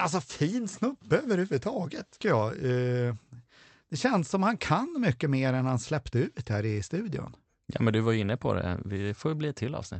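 At 2.21 s, right after "alltså fin snubbe överhuvudtaget", there is a skip ahead. Roughly 0.7 s of speech was dropped and the two sides were spliced with no gap. The waveform shows an abrupt seam, and spectrogram harmonics break and jump discontinuously.

From 2.33 to 3.74 s, leading into "det känns som han", a jitter buffer speed-up runs the speech at about 111% of normal speed with unchanged pitch, trimming roughly 150 ms in total by cutting short pitch-period pieces. It sounds hurried. On a spectrogram, syllables look compressed in time while harmonic spacing stays constant. The band stops near 8 kHz, consistent with the Opus call path.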